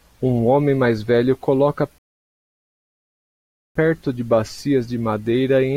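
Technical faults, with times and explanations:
1.98 to 3.76 s, rebuffering stall: right after "homem mais velho coloca" the speech drops to silence for about 1.8 s, then picks up at the exact point it stopped, with nothing skipped. The player had exhausted its downloaded audio and paused until more data arrived, adding time without losing content.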